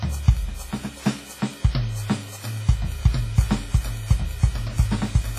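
From start to finish the music has a smeared, washy quality, with a ringing haze around every attack and a grainy hiss that swells and fades with the playing. Nothing comes through above 15.3 kHz. Taken together, that points to likely WMA compression at a starved rate, fitting something around 24 kbps. Long transform blocks spread the quantisation noise across tens of milliseconds, and quieter spectral detail gets zeroed outright, so the damage is heavy.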